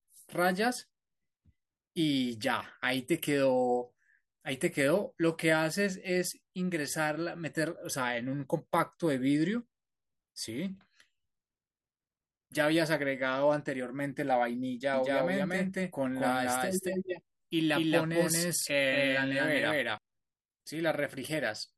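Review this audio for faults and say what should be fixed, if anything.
From 14.94 s to 19.98 s the speech is doubled: a second full-band copy trails the first by roughly 200 ms at about the same level. It has no decay or room colour, and it cuts in and out abruptly at those two points. This is a doubled audio track, likely from the same source being captured a second time through a slower path, or from an edit that left two misaligned copies stacked. To prevent it, route each source to the mix through a single path and check edits for overlapping duplicate regions before export.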